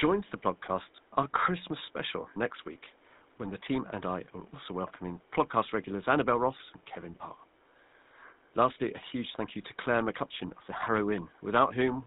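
From start to finish the speech carries the buzzy, gravelly roughness of the GSM full-rate codec, plainly audible and consistent with its 13 kbps rate. Nothing above 4 kHz survives, and a pulse-driven vocal-tract model replaces the waveform. Clean narrowband telephone audio is dull without this grit. Faint room noise sits about 34 dB below the speech.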